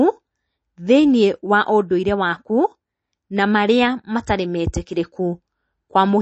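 Speech, likely encoded with heavy MP3 compression consistent with a 32 kbps bitrate. Throughout, everything above 8.3 kHz is cut, and weak frequency lines switching on and off leave a plainly audible watery, swirly texture.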